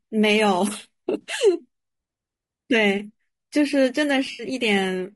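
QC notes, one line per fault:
Throughout: low-delay AAC compression. The speech sounds rough and grainy, with noise filling the gaps between pitch harmonics and a thin, synthetic top band. This is likely AAC-ELD at about 32 kbps, whose short frames resolve harmonics poorly at that rate.
1.21–1.27 s and 4.31–4.45 s: AAC frame loss with concealment. Each gap leaves a brief smeared, noisy patch as the decoder rebuilds audio from the last good spectrum. The gaps fit about two and four dropped frames of roughly 20 ms each.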